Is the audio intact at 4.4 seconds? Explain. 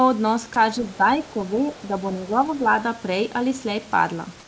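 No. From 4.40 s to the end at 4.47 s, the room background gives way to comfort noise: a steady, featureless hiss about 1 dB quieter, likely generated by the receiver during a transmission pause. A spectrogram shows a smooth, textureless band below 8 kHz there.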